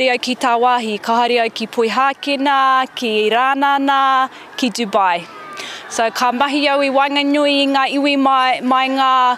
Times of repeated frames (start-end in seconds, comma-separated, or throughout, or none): none